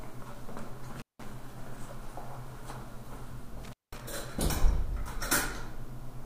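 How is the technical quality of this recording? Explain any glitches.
The recording has two glitches, both from an intermittent contact. At 0.97 to 1.24 s and 3.64 to 4.01 s, a loose connection opens for about 180 and 190 ms. The audio cuts out with crackle at each edge, which a clean digital dropout wouldn't have.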